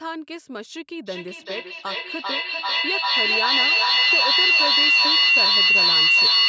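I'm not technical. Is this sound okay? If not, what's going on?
No, it isn't. From about 1.06 seconds to the very end, there is a feedback echo between two devices. Two phones or computers in the same room are on one call. One plays out the other's sound, and that microphone hears it again. Each bit of speech comes back roughly every half second or a little less, thinner and more ringing. Here the loop is strong, so the repeats build up and grow louder than the speech itself instead of fading.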